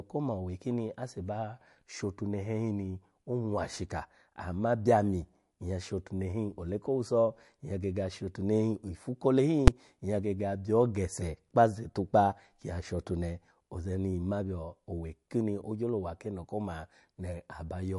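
MP3 compression runs throughout, and the speech shows plainly audible damage: nothing survives above 11.3 kHz, and weak frequency detail flickers in and out between frames, giving a watery, swirly edge to the sibilants. This is likely a low-bitrate MP3 encode, which fits something around 51 kbps.

Invalid numbers at full scale appear at 9.68 s, between "hin ifu kole hin" and "nyya gege abyo gese". A calculation produced invalid values that were forced to the maximum level for about 5.33 ms, consistent with a 256-sample block, and this is heard as a single loud bang.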